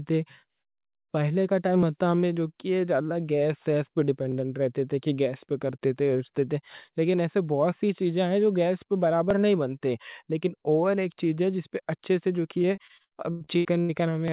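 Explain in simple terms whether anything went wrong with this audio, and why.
Audio missing between chunks, at 9.31 s (just after "ہیں جو گیس پہ"), at 11.80 s (just after "چیز ہے جس پہ"), and at 14.28 s near the very end. At each point a tiny sliver of sound, a few thousandths of a second, drops out, and the two sides are butted together with no pause. The skips fall about 2.5 seconds apart, so the likely cause is a recorder handling the audio in 2.5-second blocks and losing a little at each handover.

Repeated packet loss (robotic sound), from 12.62 s to 13.91 s. Over this stretch the speech arrived in pieces with about ten small holes in it, the longest around a tenth of a second. Each hole was patched by stretching out the sound just before it, so roughly a third of this stretch is filler rather than real speech. That patching gives the choppy quality heard there.

The call link itself is a telephone-quality connection, so the sound is narrow, with nothing above about 4 kHz.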